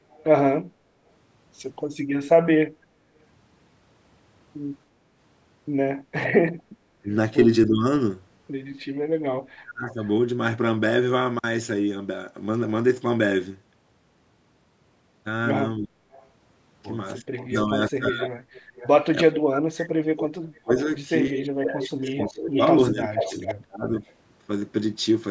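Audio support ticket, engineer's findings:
Echo leak: faint delayed copy of the speech at 0.11–0.24 s and 9.92–10.07 s (about 30 dB down, 280 and 390 ms lag), then 16.12–18.88 s and 20.58–24.14 s at about 450 ms, climbing to about 5 dB under. Likely far-end speakerphone AEC letting residual echo back through.

Speech suppressed in double talk: talker dips at 7.02–7.84 s (mild, around 10 dB), 9.57–9.97 s (around 30 dB), and in chunks across 15.79–24.04 s (up to around 35 dB, roughly 4 s total). Likely AEC ducking its own talker along with the loudspeaker echo while everyone talks at once.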